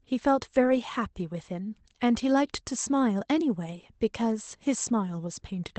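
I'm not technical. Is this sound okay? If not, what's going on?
No. Around 0.63 to 0.77 s, a few pieces of the speech were lost on the way over the call connection. The call had sent backup copies, so the gap was filled: a lost packet rebuilt from error correction. That stretch sounds briefly rougher and noisier.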